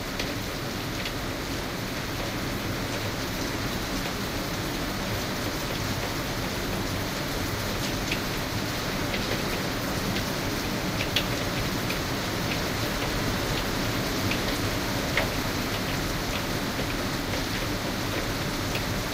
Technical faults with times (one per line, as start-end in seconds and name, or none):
2.08-14.08 adaptive stream at a lower bitrate